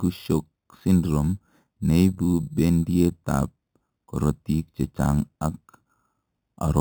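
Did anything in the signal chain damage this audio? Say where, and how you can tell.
Yes: imaging from sample-and-hold upsampling at the resampling stage, 8 kHz to 44.1 kHz. Metallic fizz throughout, about -24 dB; spectrograms show mirrored speech harmonics at 4–8 kHz, waveforms staircase steps.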